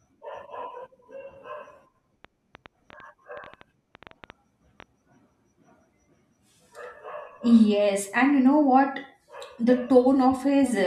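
A train of clicks runs from 2.25 to 4.83 s: about twenty similar pulses at roughly 7 per second, unevenly spaced and about as loud as the speech, likely interference or a faulty connection or power supply.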